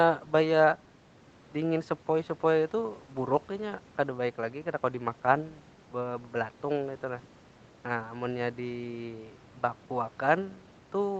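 Nothing stood out on listening to this speech, which carries the usual narrowed sound of a call path with no content above about 8 kHz.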